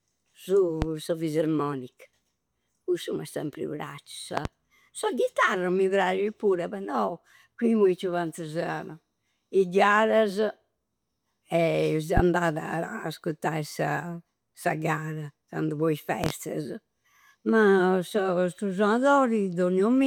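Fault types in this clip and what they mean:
Loud pop: Six sharp pops in four bursts land on top of the speech, which carries on underneath. They come at about 0.8, 4.4, 12.2 and 16.2 s. The pops just after "m'è sempri praccia" and just after "candu po i" are doubles in quick succession. Most peak about 15 dB above the speech. The one at 12.2 s reaches about 20 dB. The likely cause is a sudden voltage pulse entering the signal path.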